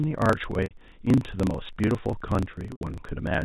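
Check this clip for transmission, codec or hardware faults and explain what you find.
Two faults stand out in this speech clip: a block size mismatch running throughout and two bursts of packet loss with pitch repetition.

Block size mismatch (truncated), throughout: one stage hands over longer blocks than the next one reads, so the tail of each block is discarded before it can be played. The result is a steady buzz at 27.2 Hz, the rate at which those cuts land, and speech that runs about 1.16 times fast while keeping roughly its normal pitch. The figures point to written blocks of around 1024 samples being read short.

Packet loss with pitch repetition, 0.64 to 0.71 s and 2.73 to 2.81 s: about 80 ms and then 100 ms of audio never arrived. The receiver repeated the last pitch period to cover each gap and faded it away over about 50 ms. Both losses outlast that fade, so the speech becomes a brief held, buzzy tone, sinks into silence, and returns through a short cross-fade.

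The G.711 A-law telephone coding limits the audio to below 4 kHz, as that format does.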